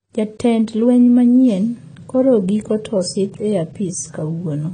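Speech throughout shows AAC compression: nothing sounds above about 9.3 kHz, and sibilants turn fizzy and warbling, pointing to roughly 24 kbps AAC-LC as the likely cause. Unlike a plain low-pass filter, the band below the cut-off is also patchy and smeared.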